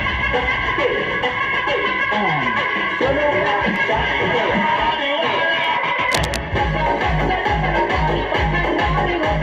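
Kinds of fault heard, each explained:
Block of digital silence: The output briefly drops to silence, with hard edges at 3.76 s and 5.64 s. Both gaps are under 2 ms and heard as ticks.
Cable scratch noise: From 6.09 to 6.37 s, fairly loud, dense rustling bursts sit over the sound, likely from a worn cable or connector being moved.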